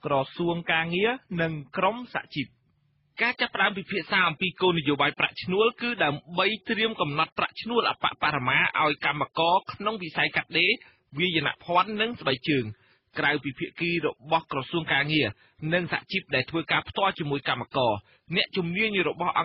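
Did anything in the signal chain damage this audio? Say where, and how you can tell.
No, the signal chain left no audible damage on this audio at any stage between capture and playback.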